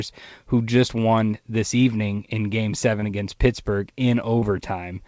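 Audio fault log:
3.00–3.04 s and 4.40–4.44 s: short concealed packet loss. Each time about 20 ms of audio failed to reach the decoder, so the receiver extended the preceding sound and cross-faded back, leaving a brief smear or wobble against a band that stops at 8 kHz.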